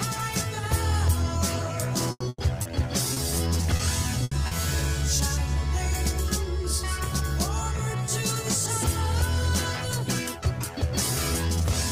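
From 2.11 to 4.54 s the sound turns choppy and robotic: repeated packet loss, with seven gaps (longest 100 ms) patched by extending earlier sound, unlike one clean dropout.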